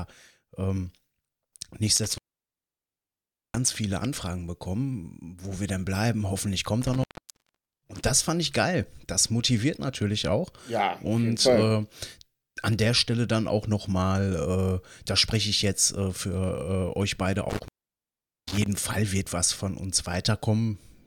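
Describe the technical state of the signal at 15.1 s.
The audio at 15.1 s is intact, with the speech passing cleanly through that moment and no audible technical fault.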